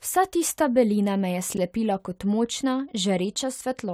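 Chunks out of order in this speech clip appear between 1.54 and 1.58 s, just before "kot močna". One 10 ms chunk of audio arrives late and plays about 30 ms after its proper place, which fits a displacement of three chunks. It comes after the chunks that should follow it. Nothing is lost, but the reordering creates three hard joins in quick succession, heard as a brief jumbled stutter.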